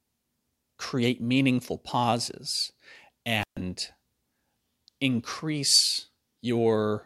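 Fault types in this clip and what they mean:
Intermittent contact: a loose plug or cable lets the connection open briefly, so the signal path is broken and then restored. In this speech it happens once, from about 3.41 to 3.57 s. The sound drops away for roughly 134 ms, with a crackle as the contact breaks and again as it closes. In the gap you're left with just a faint hiss instead of the speech.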